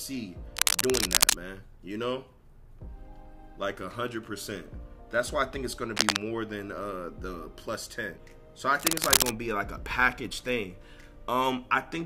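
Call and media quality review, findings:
Cable scratch noise at 0.57–1.35 s, 5.93–6.17 s and 8.79–9.31 s, a few dB above the sound. Likely a worn cable or connector being moved, with fluctuating contact resistance. Dense broadband vertical smears on the spectrogram, ragged bursts in the waveform.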